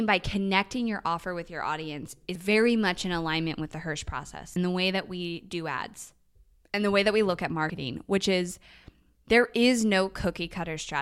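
At 2.35 s, between "offer with your audience" and "very much in alignment", there's a quick blip from damaged data in a compressed stream. It comes back from 4.53 to 4.56 s, just before "the way that we", and again from 7.66 to 7.70 s, between "that we look at" and "which is". Each time, corrupted bytes make the decoder misread frames and lose sync until it finds the next header, leaving a brief glitch.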